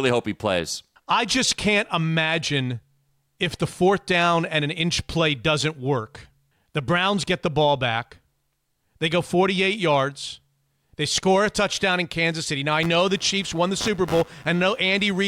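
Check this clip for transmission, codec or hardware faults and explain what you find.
One hardware fault is present: computer activity noise from 12.83 s to the end at 15.28 s. Changing load on the computer is disturbing the audio circuit's shared ground, so a buzzy, scratchy pulsing at around a hundred pulses a second rides roughly 20 dB under the speech, following the machine's activity rather than the sound.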